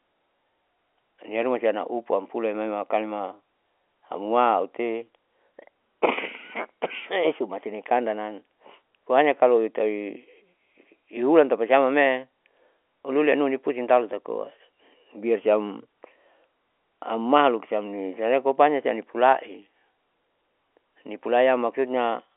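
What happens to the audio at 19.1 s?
At 19.1 s the speech carries on intact, with nothing but the steady narrow telephone band of G.711 coding.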